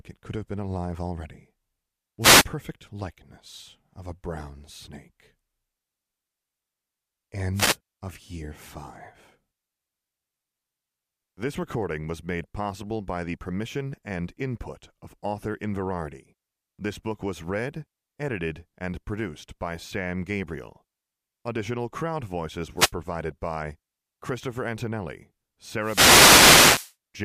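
At 2.20 to 2.45 s there's a quick swish of static, then another at 7.54 to 7.77 s and a shorter one at 22.76 to 22.92 s. The last, from 25.78 to 26.95 s, runs over a second. These are wireless microphone noise hits: the FM radio link fades as reflected signals cancel, the receiver's noise floor climbs, and static washes across the speech until the signal recovers.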